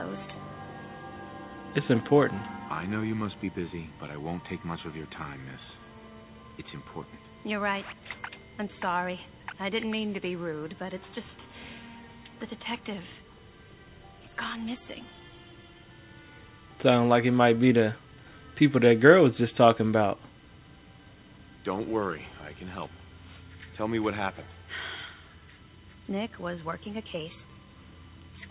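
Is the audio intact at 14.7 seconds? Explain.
Yes, the audio is intact at 14.7 seconds, with no dropout, glitch or other fault at that moment.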